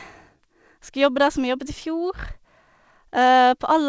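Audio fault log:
throughout: clock drift between sender and receiver. The sender's audio clock runs slow, by roughly one and a half percent against the receiver's, so samples arrive slightly too slowly and the jitter buffer keeps draining toward empty. The receiver has to keep padding the stream to avoid running dry. This leaves small timing hiccups scattered across the whole speech clip at uneven intervals rather than on a steady beat.
0.36 s to 3.86 s: repeated timing corrections. To make up for the slow sender, the receiver repeatedly stretches or repeats short pieces of the signal. Across this stretch the speech plays at about 98% speed, and around 70 ms is added in total. Every edit goes the same way, lengthening the audio, but the edits are unevenly spaced. Where they are heard at all, they come through as faint hiccups and a slightly dragging, unsteady tempo.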